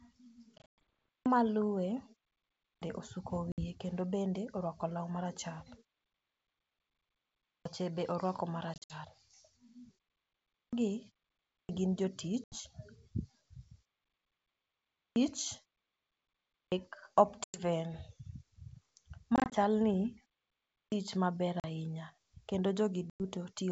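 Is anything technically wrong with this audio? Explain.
Yes. The speech has two recurring faults.

Packet loss on an ADPCM call occurs at 0.58–0.64, 3.52–3.63 (just before "kendo bende orwako law"), 8.74–8.96, 12.44–12.59, 17.44–17.59, 19.36–19.55, 21.60–21.65 and 23.10–23.21 s. Between 40 and 160 ms goes missing each time, sometimes in scattered gaps, which fits 20 ms packets. The missing audio is replaced by silence, and because the lost packets never reach the decoder, its predictor and step size drift from the sender's. The speech then returns with a click, distortion or a wrong level before settling. The waveform shows sharp-edged flat gaps, and the spectrogram shows blank vertical slots.

Clipped start after a pause happens at 0.94–1.26, 2.50–2.82, 7.32–7.65, 10.35–10.73, 11.34–11.69, 14.79–15.16, 16.35–16.72 and 20.59–20.92 s. Each follows a silence of 0.31 to 1.57 s. The output device sleeps during the silence and takes about a third of a second to wake, so each utterance jumps in abruptly without its opening sounds. 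The waveform shows an abrupt onset with no rising envelope, and the spectrogram shows speech energy starting as a hard vertical wall.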